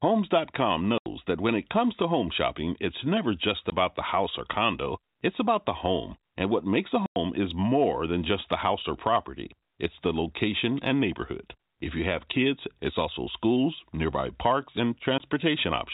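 Hard-edged gaps cut the speech at 0.98–1.06 s before "that when it comes", 3.70–3.72 s after "shopping it's never just", 7.06–7.16 s, and 15.18–15.20 s after "also schools nearby parks". This is packet loss filled with silence. The 80, 20, 100 and 20 ms holes fit 20 ms packets.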